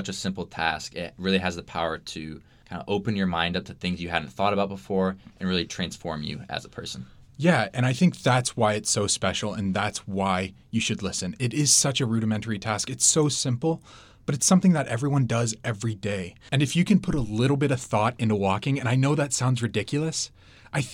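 No technical faults are audible anywhere in the recording.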